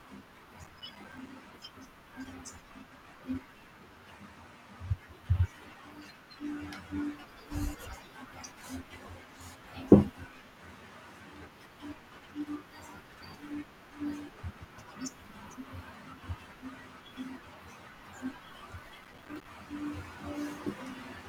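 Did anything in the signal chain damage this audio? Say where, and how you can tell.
Yes. Processor overload crackle at 0.64–1.35 s and 19.04–19.45 s, at the driver and buffer stage. The speech breaks into gritty crackle made of many tiny silent gaps, each around 5 ms, which points to the processor repeatedly missing its buffer deadlines.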